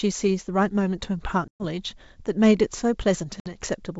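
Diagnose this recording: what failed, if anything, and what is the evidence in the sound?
Network packet loss on an ADPCM call, carried over wideband G.722 at 64 kbit/s. Silence-filled gaps with hard edges open at 1.48–1.65 s, where 120 ms of audio is missing, roughly seven packets, and at 3.40–3.55 s, where 60 ms, about three packets, is gone. The receiving decoder's adaptive predictor and step size drift out of step with the sender's, so speech resumes slightly distorted before settling within some tens of milliseconds.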